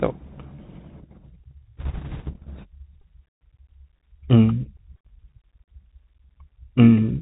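A speech recording carried over a Bluetooth CVSD headset codec throughout, and the damage is plainly audible. The sound is narrowband, with a granular hiss beneath it and scratchy, distorted sibilants where loud high content outruns the codec's adaptive step size, which fits a 64 kbps CVSD stream. On a spectrogram everything stops sharply near 4 kHz, with a speckled noise floor below it. From 1.77 to 2.32 s come bit errors on a Bluetooth voice link. Flipped bits add a rushing, crackly noise over the speech, consistent with an error rate of a couple of percent. Because each bit carries only a small step and its effect fades, there are no loud clicks. A spectrogram shows a broadband wash of grainy noise filling that half-second band up to the 4 kHz ceiling, and the waveform looks fuzzy and thickened there, without isolated spikes.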